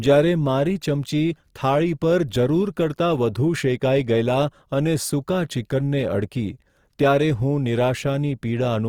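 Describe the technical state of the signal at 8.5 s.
At 8.5 s the speech sounds grainy and rough, with a noisy sheen over tones, as it does throughout the clip. The likely cause is Opus compression in its music mode, filling starved bands with folded or noise energy, which fits about 24 kbps.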